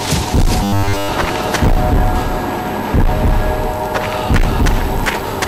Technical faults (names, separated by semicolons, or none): hard clipping; robotic sound from repeated short buffers